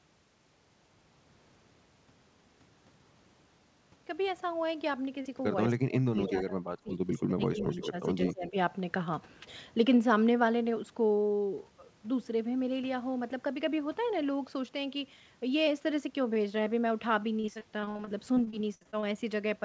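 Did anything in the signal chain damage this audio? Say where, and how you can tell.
Yes. Between 5.65 and 8.33 s a delayed copy of the voice surfaces at 5.65, 6.2, 6.87, 7.59 to 8.06, and 8.27 s. It trails the original by about 171 ms and sits about 10 dB below it, about 20 dB at 6.87 s. This is echo leak at the call-processing stage, likely from a far-end loudspeaker whose echo canceller let residue through. A fixed lag behind a real sound marks it as echo rather than room reverberation, which decays smoothly without a discrete repeat.

Overlapping those echoes, the main voice sinks three times: 5.71 to 6.93 s by up to about 25 dB, 7.09 to 8.04 s by about 15 dB, and 8.31 to 8.56 s by about 20 dB. This is likely speech suppressed in double talk. The canceller, faced with both sides at once, turned down the near talker along with the echo. Unlike packet loss, the level ducks and recovers in step with the other side's activity, without any smeared or repeated fill.

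From 17.4 to 19.04 s the audio turns choppy, with around sixteen short holes, the longest 63 ms, and roughly a quarter of the stretch patched over. This is repeated packet loss on the network, concealed by extending the last sound into each gap. The rapid run of patched holes gives it away. Double-talk suppression only lowers the level and never invents sound.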